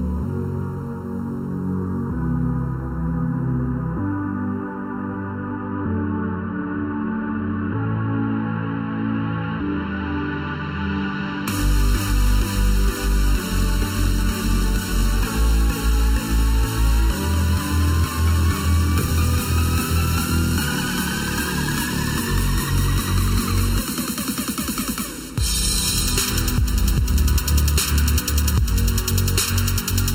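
Channel delay (comb filtering) runs throughout. One channel lags by under a millisecond, so the mono sum notches from about 700 Hz upward, sounding hollow and phasey.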